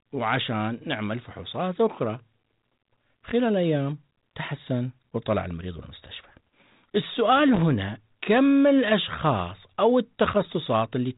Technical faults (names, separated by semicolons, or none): loose connector crackle